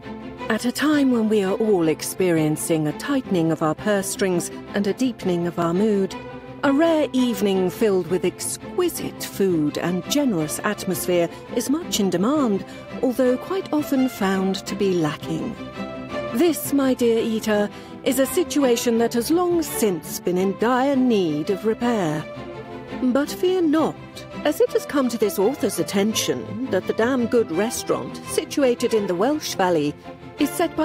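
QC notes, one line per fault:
3.56 s and 5.62 s, block of digital silence: twice a run of samples was zeroed, likely because the output path failed to deliver audio in time, about 1.3 ms at 3.56 s and 2.7 ms at 5.62 s, lengths that fit a 64-sample and a 128-sample buffer. The signal drops straight to zero and jumps back with no fade, so each gap is too brief to hear as a hole and comes across as a sharp tick.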